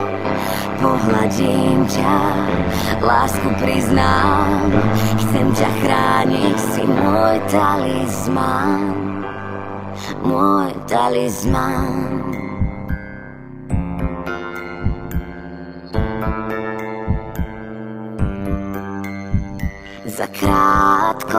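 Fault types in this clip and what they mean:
Overlap-add ripple: the audio has been split into windowed frames and rejoined with an overlap whose windows do not add up to a constant gain, so the level dips and recovers once per frame for the whole clip. Here the swing is very deep, about 60 dB, and repeats at around 100 Hz, turning the sound into a metallic buzz with extra tones around each note that modulates everything rather than a gentle tremolo.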